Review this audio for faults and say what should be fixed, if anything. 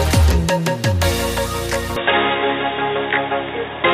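From 1.96 s to the end the sound abruptly turns dull and boxy, with nothing above 3.8 kHz, a level jump of roughly 5 dB and a faint new background hiss. This is likely an input switched to a poorer device. Lock the recording input to a single device so the system cannot change microphones or profiles mid-take.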